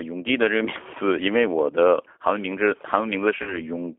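A speech recording carrying plainly audible G.729 codec damage throughout: rough, slightly synthetic voicing consistent with 8 kbit/s coding, with a spectrogram showing energy confined to roughly 300 Hz to 3.5 kHz. From 3.43 to 3.61 s, VoIP packet loss concealed by the speech codec stretches the voice into a fading buzz or coloured noise. The gap points to about 40 ms missing, fitting two lost 20 ms packets. The waveform shows a decaying, overly regular stretch that stays weak after audio resumes.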